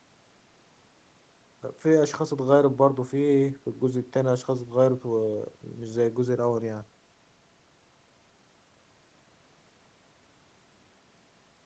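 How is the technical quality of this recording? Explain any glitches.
No glitches turn up in this speech; it has the slightly narrow, call-style sound you'd expect from a call microphone chain and codec, with the lowest bass trimmed and nothing above 8 kHz, which is just how that path normally shapes audio.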